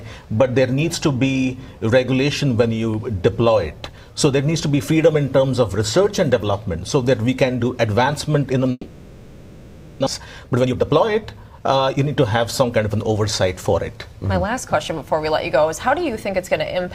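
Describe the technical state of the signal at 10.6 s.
At 10.6 s you're inside a jitter buffer speed-up running from 10.19 to 11.97 s: the receiver trims short pitch-period chunks to drain excess buffered delay, so the sound runs about 16% faster at unchanged pitch, hurried, losing roughly 0.3 s overall.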